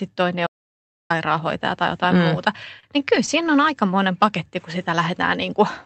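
It's a speech clip, and there's an audio dropout to silence from 0.47 to 1.10 s: about 0.63 s of dead air with no room tone, most likely the input dropping out while silence kept being written. Then from 2.65 to 3.50 s you get repeated stalls (stutter), nine short jitter-buffer underruns, the longest 32 ms, patched by stretching the last sound, so it drags without losing anything. Throughout, the audio has the coding character of an Opus call path, with the top end cut off at 8 kHz.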